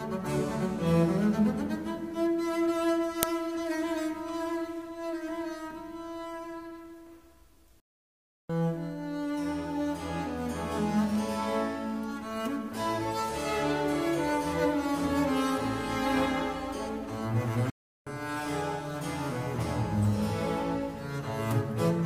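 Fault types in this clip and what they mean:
Uninitialised buffer, 3.23 s: a single harsh click-like burst of digital noise, lasting only about 0.73 ms, which fits a 32-sample block being sent to the output before any audio was written into it. Whatever data was already sitting in that memory was played out as if it were samples, so the burst is unrelated to the surrounding sound and abruptly replaces it.
Playback stall, 7.80 to 8.50 s and 17.70 to 18.07 s: the sound cuts to silence in mid-flow, first for about 0.69 s and then for about 0.36 s, before carrying on again. The likely cause is the player running short of data to feed the output, or its playback thread being held up, so nothing reaches the output until the supply recovers.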